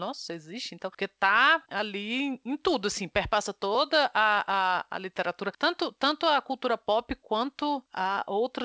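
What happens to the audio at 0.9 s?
Nothing goes wrong at 0.9 s: the speech passes intact through the G.722 call path, with its usual ceiling of about 8 kHz and no dropout, glitch or distortion at that point.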